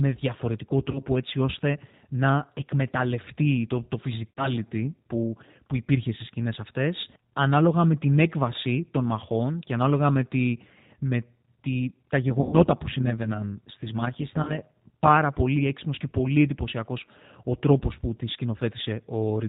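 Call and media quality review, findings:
G.729 codec, throughout: band-limited at 4 kHz, rough, synthetic timbre at an 8 kbit/s rate; pulse-excited vocal-tract model rebuilding the speech, damage plainly audible.

VoIP packet loss concealed by the speech codec, 0.91–1.03 s (before "έτσι ώστε να εκμεταλλευτεί"), 4.31–4.54 s (between "να εκμεταλλευτεί το το" and "που που υπήρχε στι"), 12.41–12.55 s, 14.43–14.52 s: stretched, fading extrapolated sound; gaps fit roughly 40, 60, 120 and 40 ms of lost packets.

Overlap-add ripple, 12.3–15.09 s (between "τη με τη τα" and "πολύ έξυπνος και πολύ"): metallic buzz around 100 Hz, about 11 dB deep; frame windows not summing to constant gain.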